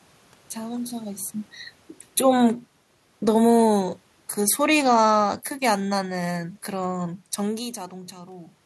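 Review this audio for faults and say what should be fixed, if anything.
Automatic gain falling from 4.49 to 7.07 s lowers the level by about 4 dB; the room noise sinks with the speech, unlike the talker movement near 1 s. Prevent it by lowering input gain or slowing the AGC attack.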